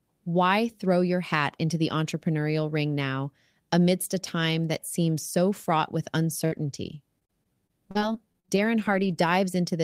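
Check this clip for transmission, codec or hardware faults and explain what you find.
One transmission fault is present: repeated packet loss (robotic sound). It runs from 6.45 s to 9.28 s, starting just after "seems so fraught with". Eleven short gaps fall in this stretch, the longest 56 ms, covering about a tenth of the span. The receiver fills each gap by stretching the last received sound, around 300 ms in all. The speech turns choppy, with small pieces missing.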